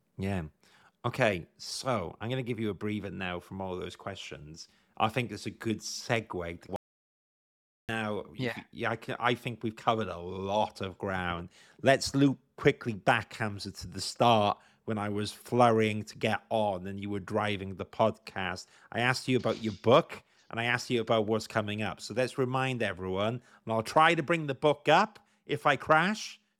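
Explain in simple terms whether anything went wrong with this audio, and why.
Right after "good segue to", at 6.76 s, there is an audio dropout to silence lasting 1.1 s, likely a lost input. It's dead silent with no room hum, unlike a natural pause.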